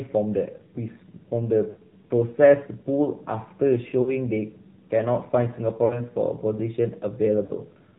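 AMR narrowband mobile codec throughout: the speech is squeezed through 8 kHz sampling, so nothing above 4 kHz survives, and the low bit budget, which fits AMR-NB at about 7.4 kbps, leaves the voice plainly buzzy and synthetic.

Lost AMR speech frames at 1.70–1.76 s, 4.02–4.17 s, 5.86–6.05 s and 7.44–7.53 s: the decoder patches each gap by repeating its last pitch and vocal tract settings at falling gain, giving brief smeared dips. The last gap loses the most audio, consistent with three missing 20 ms frames rather than two.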